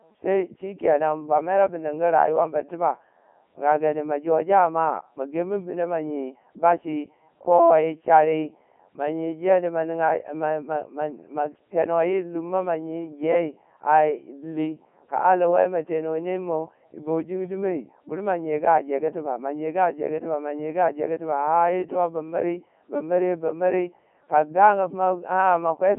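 From start to finish the speech passes through a Codec 2 vocoder, and the damage is heavy. Only pitch, voicing, energy and a coarse spectral envelope survive, and the decoder rebuilds the voice from sine waves, giving a robotic, buzzy tone that fits the 3.2 kbit/s mode. The band runs from 200 Hz to 3.6 kHz, with nothing above 3.8 kHz. A spectrogram shows rigid harmonic stripes with a hard ceiling, and the waveform no longer matches natural speech.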